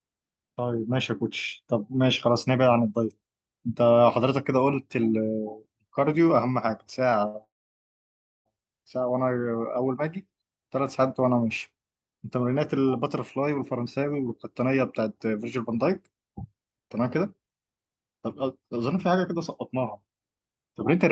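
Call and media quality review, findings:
Held, stretched sound with a faint buzz at 7.27–7.36 s, about 66 ms. Short stall from a late packet: the jitter buffer ran dry, and the receiver extended the last sound until the packet landed. Nothing is lost.

Buzz fading to near-silence at 7.44–8.47 s, about 1.0 s long, before the audio resumes exactly where it stopped. Call audio freeze, likely from packets held up in transit that emptied the jitter buffer. A gap was inserted and no content dropped.

Hurried delivery at unchanged pitch at 13.67–19.36 s (108% speed) and 19.77–21.11 s (119%). Jitter buffer speed-up: the receiver cut short pitch-period slices to shed excess buffered delay, roughly 0.4 s and 0.3 s removed.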